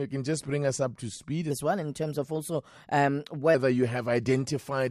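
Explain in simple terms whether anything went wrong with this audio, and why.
From 1.51 to 3.55 s the speech suddenly runs fast and sounds higher and more hurried, about three semitones up, then returns to normal. This is a section at the wrong speed: that stretch plays 1.16 times too fast, likely because an editor or player applied the wrong clock.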